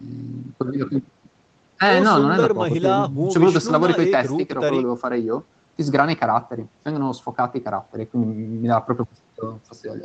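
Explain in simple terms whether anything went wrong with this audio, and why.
Nothing went wrong: the speech carries the ordinary marks of an internet call, having passed through the call's microphone processing and a WebRTC call path using the Opus codec, which together leave no sound above 8 kHz and add only the usual coding noise.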